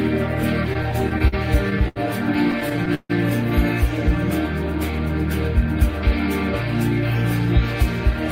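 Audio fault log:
0.73–1.34 s, repeated stalls (stutter): Packets arrived later or slower than playback needed, so the jitter buffer emptied seven times. Each time, the receiver extended the last sound, about 108 ms in total, with the longest fill about 45 ms. Nothing is lost, but roughly 18% of this stretch is held-over sound, so it jerks and drags. On a spectrogram, short blocks of frozen, horizontally smeared spectrum interrupt the flow. The waveform shows brief runs of near-identical repeated cycles.
1.88–1.98 s, short stall from a late packet: One packet missed its playout time and the buffer ran dry. The receiver stretched the preceding sound for about 75 ms until it arrived, then resumed from the same point, leaving the stream 75 ms later than before. Nothing is missing, but one moment hangs too long with a faint buzzy, slightly dipped quality. A spectrogram shows one band of flat, unchanging harmonics. 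The waveform shows a patch of repeating periods at slightly lower level.
2.52–3.11 s, repeated stalls (stutter): Six more buffer underruns, with about 198 ms of concealment. One of these fills is a single 148 ms hold, long enough that the extended sound fades down before playback resumes. About a third of this span is filler, so the audio stumbles more heavily here than in the first run. On a spectrogram, frozen, stretched columns appear, and the long one tapers in energy. The waveform shows repeated cycles, with one long decaying stretch.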